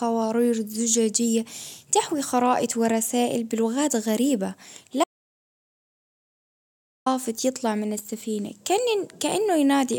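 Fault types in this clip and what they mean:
Audio dropout to silence: the speech cuts off abruptly at 5.04 s and returns mid-flow at 7.06 s, leaving about 2 s of silence with no room tone. The input was likely lost while recording continued writing silence, so that stretch is gone.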